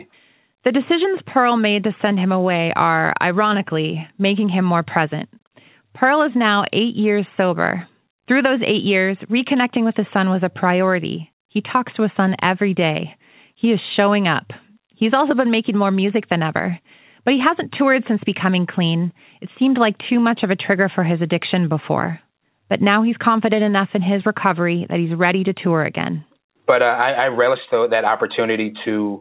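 Speech over a WebRTC call path with nothing above 4 kHz, consistent with G.711 mu-law coding, and no faults present.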